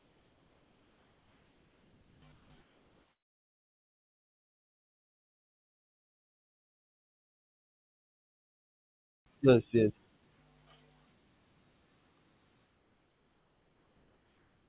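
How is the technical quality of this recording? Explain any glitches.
The speech comes through a narrowband call line with nothing above 4 kHz, which fits a G.711 codec. The pauses show comfort noise in place of the background. From 0 to 2.22 s, 2.32 to 2.5 s, and 12.66 s to the end, the real room tone gives way to a flat, featureless hiss about 3 to 4 dB quieter. That's likely because the sender stopped transmitting during silence and the receiver synthesised filler noise.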